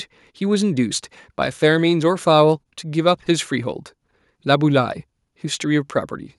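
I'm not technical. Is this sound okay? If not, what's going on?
Yes, there are no technical faults in this audio.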